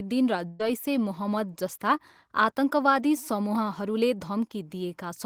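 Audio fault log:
0.47–0.61 s, burst of packet loss: About 120 ms of the speech never arrives in time to play. The receiver fills the hole by repeating the last bit of sound it had and lowering it as the gap runs on. That gives a brief stretched, fading sound instead of clean speech. There is no silence. Playback then picks up further along, so about 120 ms of the original speech is simply gone.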